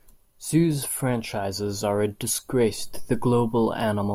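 No technical faults can be heard anywhere in the speech; the signal stays steady and intact throughout.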